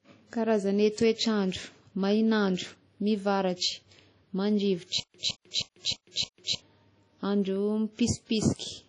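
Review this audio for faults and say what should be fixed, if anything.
The audio was likely encoded with WMA compression at a low rate, in a way that fits about 32 kbps. Long transform blocks smear quantisation noise over tens of milliseconds. The speech sounds plainly washy and ringing, with breathing hiss and nothing above 10.1 kHz. To prevent this, encode at a higher bitrate or use a lossless format.

From 5.00 to 6.55 s there is a stutter with silent gaps, likely from a stalled stream that replayed its last fragment at each retry. A 166 ms burst repeats five times, each followed by 144 ms of silence, a 310 ms cycle, and the speech due in that span is lost. To prevent this, enlarge the playback buffer so brief network or decoding delays don't empty it.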